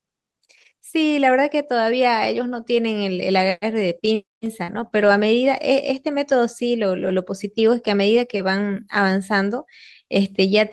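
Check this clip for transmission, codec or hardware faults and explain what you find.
Two kinds of network fault show up in this speech clip, both from lost packets, and the concealed losses cluster around the five-second mark.

Lost packets rebuilt from error correction occur at 2.57 to 2.63 s, 4.68 to 4.86 s, 4.92 to 5.22 s, 6.12 to 6.14 s, 7.02 to 7.12 s and 8.14 to 8.20 s. The decoder had no gap to fill. The following packets carried low-bitrate backup copies, and those were played instead. The sound stays continuous but turns rougher and noisier. The longest stretch, near 5 s, lasts about 160 ms.

Short concealed packet loss occurs at 4.63 to 4.70 s and 4.88 to 4.92 s. It falls just before and between the rebuilt stretches. Here no backup copy arrived. The receiver extended the preceding sound to cover roughly 40 ms and then 20 ms of missing audio. It then blended back into real audio. 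Each one heard as a brief smear or wobble. A short consonant in that spot may simply be missing.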